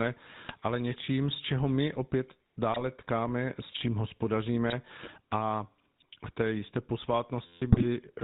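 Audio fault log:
throughout: GSM full-rate codec. The speech passes through the original 13 kbps GSM coder, which rebuilds the voice from a vocal-tract model and sparse regular pulses and cuts everything above 4 kHz, so the voice sounds muffled, buzzy and gravelly.
0.49–0.64 s, 2.73–2.81 s, 4.69–4.75 s, 7.72–7.86 s: GSM bit errors. Corrupted bits reach the decoder and scramble the filter, pitch and gain values for a few frames. The voice briefly breaks into squawks, pops and gargling, and the level jumps erratically.
7.47–7.62 s: system hang loop. The system stalls while the audio hardware keeps replaying the same 11.6 ms stretch, which fits a 512-sample buffer, about 13 times. This produces a steady 86 Hz buzz in place of roughly 150 ms of speech.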